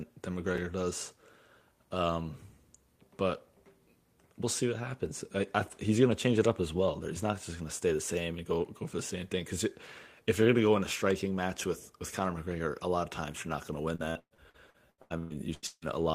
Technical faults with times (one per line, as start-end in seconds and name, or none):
0.56-0.58 chunks out of order
13.95-15.85 repeated packet loss (robotic sound)